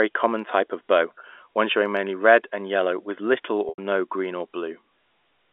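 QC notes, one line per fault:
1.91–3.53 s, loudspeaker feedback squeal: right after "of bow one showing", a pure tone near 4.5 kHz swells over about half a second to roughly 5 dB above the speech, as the microphone re-captures its own loudspeaker and the loop gain at that frequency exceeds one.
3.69–3.78 s, packet loss with pitch repetition: a 90 ms gap just before "no green or" is bridged by repeating the last pitch period, which sounds briefly held and buzzy before fading toward silence, with a short cross-fade back into the speech. The length suggests three consecutive lost packets.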